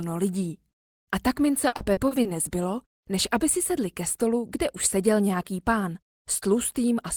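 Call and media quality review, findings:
Repeated packet loss (robotic sound), 1.67–2.28 s. Choppy texture across five gaps, longest 50 ms. Jitter buffer/loss concealment stretching last received audio over missing packets: 170 ms filled, 120 ms dropped outright, about 28% of span concealed.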